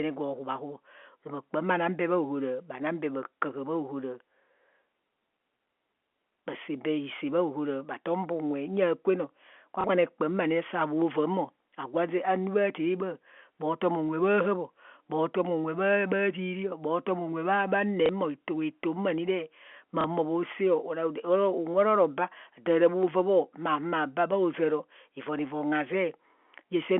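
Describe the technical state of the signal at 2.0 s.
At 2.0 s the signal is intact, with the speech carried cleanly through its G.711 telephone coding and nothing heard beyond the narrow phone-line band that format always imposes.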